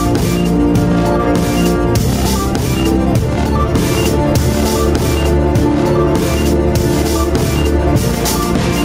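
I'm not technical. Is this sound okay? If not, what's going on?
No. All the way through, the loud and soft parts end up closer in level, and everything sounds squashed together. This is gain pumping, most likely from the recording level being set too high while an automatic level control repeatedly pulls it back down.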